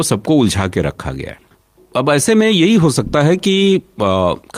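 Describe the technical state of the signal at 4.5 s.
At 4.5 s the speech is still running hurried, about 8 percent faster than normal while keeping its natural pitch. That is jitter buffer speed-up, which lasts from 1.88 s to 4.53 s. After a backlog of audio built up in the receiver's buffer, the playout repeatedly cut out short slices of one or a few pitch periods to catch up, trimming roughly a fifth of a second in total.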